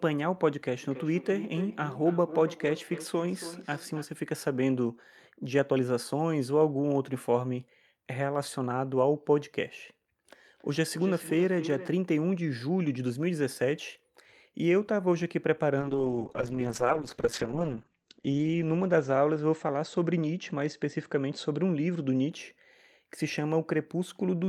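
This speech clip has two technical faults. From 0.8 to 4.09 s, and again from 10.55 to 11.94 s, there is a feedback echo between two devices. Each stretch of speech returns roughly every 300 ms, thinner and ringing, at up to about 12 dB below the direct sound. A second device in the room is playing the call back into the microphone. The echo canceller cannot remove sound it did not play itself, so the repeat goes round the loop again. From 15.8 to 22.49 s, a call bitrate drop makes the speech rough and watery. The top of the spectrum falls from 20 kHz to 8 kHz, so the sound also turns muffled. The worst stretch lasts about 1.85 s. This fits the encoder being pushed from roughly 64 kbps down to about 9 kbps after the call's bandwidth estimate fell.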